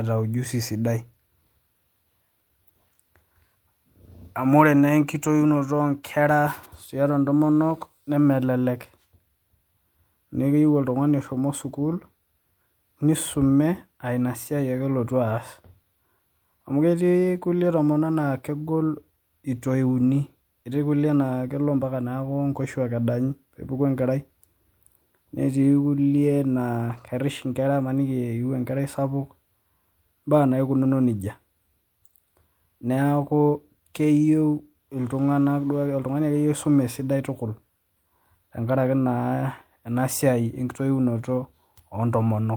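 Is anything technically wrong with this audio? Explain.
Yes. Twice the speech turns briefly rough and grainy without dropping out: from 26.89 to 26.99 s, and again from 28.77 to 28.79 s. Both are lost packets rebuilt from error correction. Packets went missing, but each following packet carried a low-bitrate spare copy, and the decoder played those copies to fill the holes. The first stretch, about 60 ms of rebuilt sound, fits roughly three separate packets. The second, about 20 ms, fits one.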